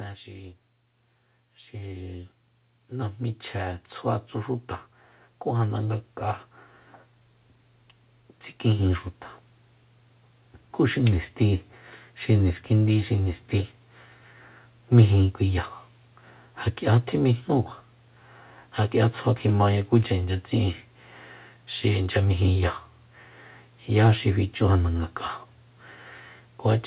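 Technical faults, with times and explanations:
0.28–4.32 s, automatic gain rising: the speech and the background noise behind it swell together by about 7 dB over four seconds. The gain control judged the input too quiet and raised its level slowly. Both climb as one because the gain acts on everything. The audio also has nothing above 4 kHz, which fits a narrowband telephone codec.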